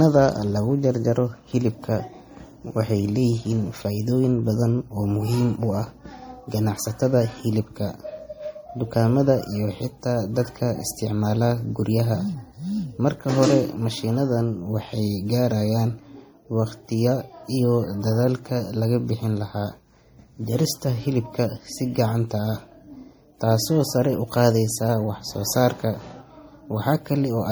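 Throughout the speech there's a dull, swirly, doubly smeared quality, likely from transcoding between lossy codecs: a WMA pass re-encoded as low-bitrate MP3, around 48 kbit/s.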